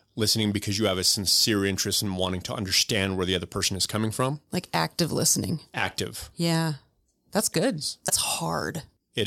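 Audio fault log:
8.08 to 8.10 s, damaged data in a compressed stream: corrupted bytes make the decoder misread frames and lose sync until the next header, producing a brief disturbance in the speech.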